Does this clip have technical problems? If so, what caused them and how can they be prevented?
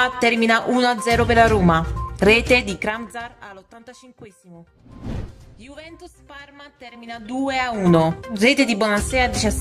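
Yes. Zipper noise appears from 2.56 to 3.64 s as the level falls about 25 dB, and from 6.88 to 7.92 s as it rises again. The gain moves in unsmoothed 3 dB steps, roughly seven a second, and each step clicks. A waveform shows a staircase envelope, and a spectrogram shows faint vertical lines at each step. Interpolating the gain sample by sample, or ramping it across each buffer, prevents it.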